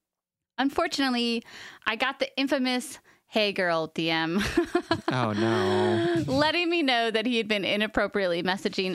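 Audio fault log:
No faults are present in this speech recording.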